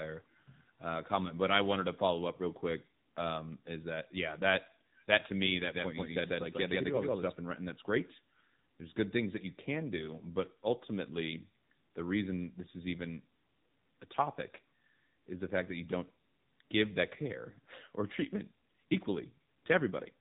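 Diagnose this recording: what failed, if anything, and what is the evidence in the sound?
The failure is at the codec stage: the speech has passed through the AMR narrowband mobile codec for the whole clip. Nothing above about 3.8 kHz survives, so the sound is boxed into the telephone band, and the voice has a plainly audible buzzy, synthetic edge. AMR-NB rebuilds speech from a vocal-tract model excited by a few pulses per sub-frame. The degree of damage points to a low mode, consistent with roughly 7.4 kbps.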